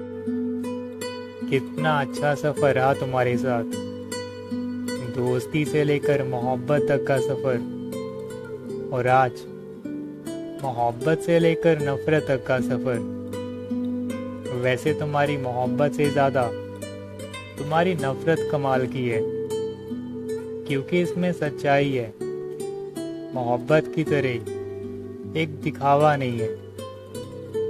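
Nothing in the audio stood out as a technical problem on listening.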